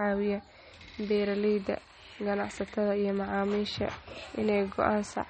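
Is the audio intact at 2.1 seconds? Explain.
No. At 2.1 s, as throughout the speech, there is likely MP3 compression, plainly audible and consistent with a bitrate near 32 kbps. The encoder has cut everything above 8.4 kHz and drops weak frequency lines frame to frame, leaving a dull, watery, swirling sound with smeared consonant attacks.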